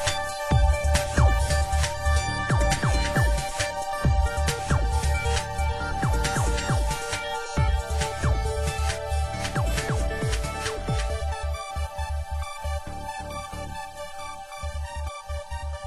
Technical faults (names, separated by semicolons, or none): none